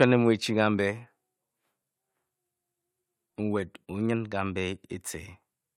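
No technical faults can be heard anywhere in this speech recording.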